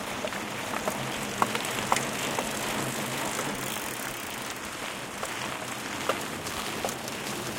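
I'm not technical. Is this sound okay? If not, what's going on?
No. There are loud pops. A double pop comes at 1.65 to 1.71 s, a single one at 3.77 to 3.79 s, and another at 6.75 to 6.77 s. Each gets softer. The sound continues underneath. A sudden electrical jolt, likely from a plug, switch or static, probably caused them.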